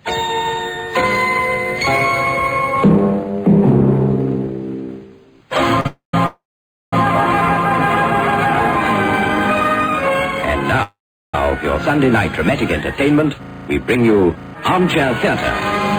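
At 5.80 s, a short stall from a late packet holds the sound for 44 ms with a slight buzz or dip. It is a stretch rather than a gap, and nothing is lost. Call audio freezes follow at 5.87 to 6.14 s, 6.26 to 6.93 s and 10.83 to 11.35 s, likely from delayed packets draining the jitter buffer. Each begins as a fading buzz or hiss and then drops to silence for about 130, 530 and 380 ms. Playback resumes where it stopped, so the timing slips but no sound is skipped.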